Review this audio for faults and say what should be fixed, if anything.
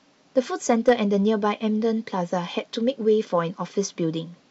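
From 0.38 to 0.91 s the speech turns gritty, with a harsh crackle riding on each loud syllable. This is hard clipping: the level is pushed roughly 4 dB beyond what the converter or processing stage can carry, so the tops of the waveform are sliced flat instead of following their natural curve. Those flattened peaks generate high harmonics that the ear hears as fuzz. To prevent it, lower the gain before that stage so peaks keep a few decibels of headroom.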